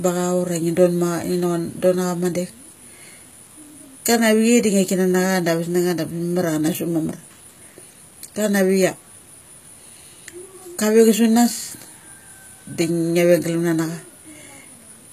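Throughout the speech, the treble sounds rebuilt rather than recorded. Nothing is present above 14.9 kHz. S sounds turn gritty and lispy. The cause is likely HE-AAC compression, which copies lower bands upward. The plainly audible damage fits a bitrate near 20 kbps.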